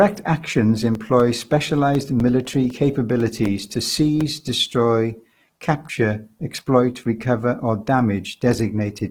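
From start to finish the speech has a rough, grainy, noise-textured quality, yet the spectrum still extends to about 20.2 kHz, so it is not muffled. This is likely Opus compression in its CELT mode at a rate around 16 kbps, filling starved bands with noise rather than leaving MP3-style swirling gaps.

From 0.95 to 4.21 s, regular ticks recur every 0.25 s, about fifteen in all. Each is a gap of roughly 2 ms of silence, where periodic USB or driver dropouts briefly interrupt the stream. The strict even spacing sets them apart from random clicks or codec grit.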